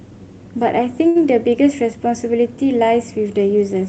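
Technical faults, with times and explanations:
1.07–1.23 s, short stall from a late packet: a packet arrived late and the jitter buffer ran dry, so the receiver held the last sound for about 80 ms until it came, then resumed where it stopped. Nothing is lost, but the speech drags briefly with a slight buzz or dip.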